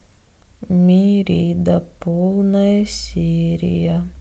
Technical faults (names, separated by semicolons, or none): none